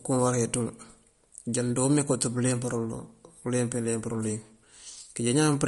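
Lossy encoding at a low bitrate is the likely cause of the damage running through the whole of this speech clip, which carries plainly audible MP3 compression artefacts. Short of bits, the encoder has cut everything above 11.2 kHz, which fits a rate of around 49 kbps, and it drops quieter frequency lines that flicker in and out between frames. The result is a dull top end with a watery, swirling texture, metallic chirping on s sounds and smeared consonant attacks.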